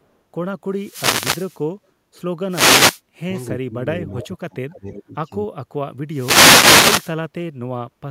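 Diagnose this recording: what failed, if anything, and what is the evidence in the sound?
Three wireless microphone noise hits land at 0.72 to 1.66 s, 2.49 to 3.01 s and 6.10 to 7.16 s. Each is a swish of static washing over the speech. That's the analogue radio link: the FM signal fades as reflections cancel at the receiver, its noise floor comes up, and the speech gets buried until the signal recovers. So the fault sits in the wireless front end, well before anything digital.

Between 3.18 and 5.8 s the speech level keeps dipping, which is what you'd hear with speech suppressed in double talk. It happens at 3.18 to 3.35 s, 3.61 to 3.76 s, 3.94 to 5.3 s and 5.47 to 5.8 s. The dips run from about 15 dB to about 40 dB, and the longest stretch loses around 0.7 s of level in total. That's call processing: the likely cause is an echo canceller that couldn't tell the near talker from loudspeaker echo while both sides spoke, so it pulled the level down.

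There's also a tiny echo leak at 3.36 to 3.42 s, sitting right between two of those dips. It's a faint delayed copy of the speech, about 0.3 s behind and roughly 40 dB down, so you really have to listen for it. Again it's call processing, likely the far end's echo canceller leaving a scrap of its loudspeaker pickup in the return path.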